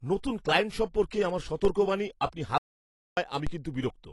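Speech clip. AAC compression, throughout: the coding damage is plainly audible, and nothing is present above 11.5 kHz. This is likely AAC-LC quantising its frequency lines against a hearing model at a bitrate around 32 kbps, lowering the cut-off and leaving the speech's upper spectrum sparsely coded. DC step, at 1.65 s and again at 3.47 s: the waveform's zero line jumps abruptly, heard as a low thump or click while the speech carries on unchanged. Each offset then decays away, as a 5 Hz high-pass would drain it. Audio dropout to silence, from 2.58 to 3.17 s: the sound cuts out for about 0.59 s into a gap with no room tone, then returns mid-flow. This likely comes from the input being lost, whether through a disconnected device, a failed link or a stray mute, while recording continued writing silence, so whatever was said in that gap is gone.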